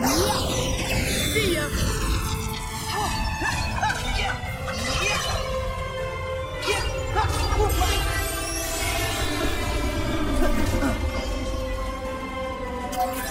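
Throughout the clip the channels drift apart: left and right run on separate clocks differing by roughly 300 ppm, so their relative delay slides steadily to around 4 ms by the end. Summed to mono, comb notches sweep slowly through the spectrum, heard as a gradual flanging.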